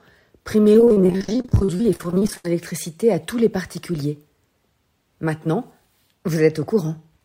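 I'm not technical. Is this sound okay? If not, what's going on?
No. From 0.73 to 2.45 s there's repeated packet loss (robotic sound): dozens of tiny gaps, none longer than 72 ms, each patched by stretching the last bit of sound. About half that stretch is filled-in guesswork, giving a choppy texture with pieces missing rather than one clean silence.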